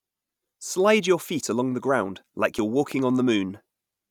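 A sudden voltage step or pulse, likely from a plug being moved, a switch, static discharge or a driver glitch, got added to the signal path at about 2.91 s, just after "the ground like you're". The result is a loud pop: two sharp thumps in quick succession over about 0.1 s, ending near 3.01 s, peaking roughly 5 dB above the speech. The speech carries on underneath the pops.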